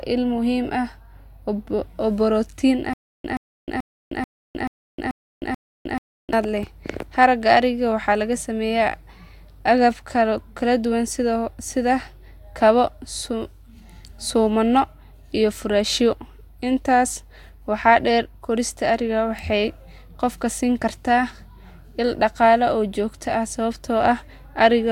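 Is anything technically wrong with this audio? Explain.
Yes, there are two faults. From 2.93 to 6.33 s there is a stutter with silent gaps. The stream likely stalled, replaying its last fragment at each retry before running dry. A 124 ms burst repeats seven times, every 435 ms, separated by 311 ms of digital silence, and the speech from that stretch is lost. At 19.39 s a bit error spike flips one bit in a single sample, so its value jumps by a power of two and snaps back. It sounds like one sharp, broadband tick unrelated to the speech.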